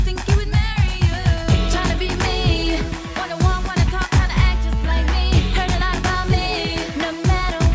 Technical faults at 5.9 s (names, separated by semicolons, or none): none